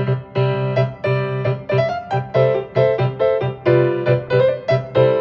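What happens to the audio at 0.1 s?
The dull, gurgling, granular texture present from the first instant persists through 0.1 s and across the whole clip. It is likely MP2 compression: the Layer II coder divides the spectrum into 32 sub-bands and, starved of bits, drops upper bands entirely while quantising the rest coarsely. The result is a muffled top end with bands flickering in and out, plainly audible damage consistent with a low rate near 80 kbps.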